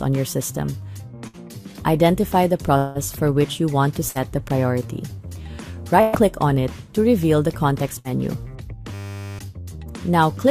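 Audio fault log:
1.27–1.36 s, 4.09–4.18 s, 6.01–6.16 s, 7.99–8.08 s: burst of packet loss. Concealment extends the last sound and fades it, then resumes later. About 60 ms is skipped each time, 120 ms at 6.01 s.
2.77–2.98 s: long network dropout. A fading buzz or hiss fills about 174 ms without reaching silence. About 180 ms of audio is skipped, likely from a network outage.
8.94–9.39 s: system hang loop. One 10 ms piece repeats 45 times, giving a steady 100 Hz buzz while the system is frozen. Roughly half a second of sound is lost.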